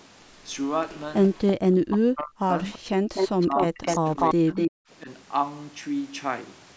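From 1.25 to 1.52 s there's an echo leak, a faint copy of the speech trailing by 337 ms, roughly 15 dB down, likely from a loudspeaker echo canceller letting some through. Then from 1.81 to 2.52 s the speech is suppressed in double talk, dipping by around 40 dB, likely because the canceller couldn't separate talker from echo. Another short echo leak slips out at 2.73 to 2.79 s, quieter at about 25 dB down. From 2.97 to 3.09 s the background is gated by the echo canceller, and the room sound drops by about 40 dB for a moment. From 3.14 to 4.71 s a long echo leak at a 247 ms delay comes through about as loud as the speech. Overlapping that, from 3.45 to 4.69 s, the speech is suppressed in double talk again, cut by around 35 dB. There's a last slight dip of a few dB at 5.03 to 5.08 s.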